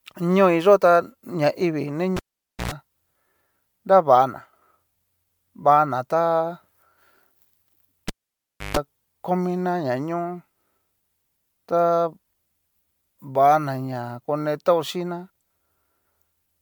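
Repeated MP3 encoding at 128 kbit/s, likely a few passes in a chain, has caused generation loss across the whole speech clip. Each pass re-quantises on a shifted frame grid, so the sound is swirly, hollow and smeared, with soft attacks, while content still reaches 20.1 kHz.

At 2.16 s, just after "tá ñaivii ni", a cable is pulled and plugged in. A pop gives way to about 0.5 s of near silence, a 60 Hz mains buzz lasting 0.1 s as the tip makes contact, and a second pop at 2.72 s. The same fault returns at 8.08 s, ending at 8.77 s just before "komina nañó", this time with about 0.64 s unplugged and a 0.14 s burst of 50 Hz buzz.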